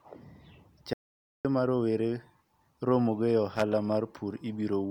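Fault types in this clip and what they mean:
Audio dropout to silence: The speech stops dead at 0.93 s and comes back at 1.45 s. The gap lasts about 0.51 s and is silent, with no room tone. The input was likely lost while the recorder kept writing silence.
Loose connector crackle: From 3.56 to 3.62 s, a short, irregular burst of crackle cuts across the speech. A worn or dirty contact is making and breaking rapidly. It chops the signal into rough, scratchy fragments for about 60 ms.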